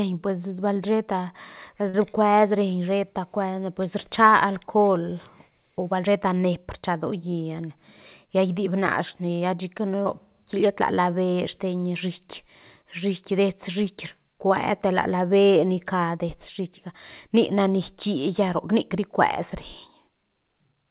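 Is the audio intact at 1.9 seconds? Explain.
No. From 1.89 to 1.94 s a brief smear or wobble replaces the speech: short concealed packet loss, where about 40 ms never arrived and the decoder extended the preceding sound.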